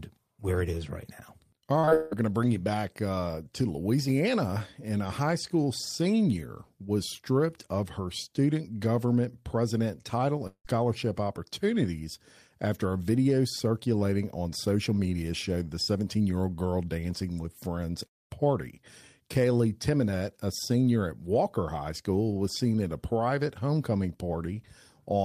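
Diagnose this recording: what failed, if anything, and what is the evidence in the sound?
From 1.79 to 2.13 s the speech turns choppy and robotic, with pieces missing. This is repeated packet loss in the network path: four gaps, the longest 161 ms, were patched by extending the previous sound, so about 70% of that stretch is concealment.

At 10.47 to 10.67 s and 18.07 to 18.32 s the sound smears into a fading buzz, then drops to near silence before speech resumes with audio missing. The likely cause is a long network dropout. Roughly 180 ms and 240 ms never arrived, and the concealment faded out.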